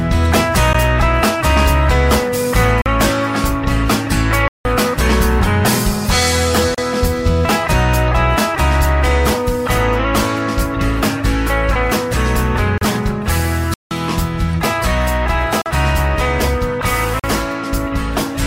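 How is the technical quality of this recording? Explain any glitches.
The recording has two kinds of dropout running through it.

Gap at a join of encoded pieces: a brief hole at 0.73 s (about 14 ms), then 6.75–6.78 s and 12.78–12.81 s (about 34 ms each), every 6 s. Separately encoded chunks were butted together untrimmed, so codec start delay and end padding leave slightly smeared silences before the sound resumes where it left off.

Block of digital silence: hard cuts to silence at 2.82–2.86, 15.62–15.66 and 17.20–17.24 s (about 43 ms each), plus longer ones at 4.48–4.65 and 13.74–13.91 s (about 171 ms). There's no fade, so the sound cuts out and back abruptly. The lengths fit unfilled 2048- and 8192-sample buffers.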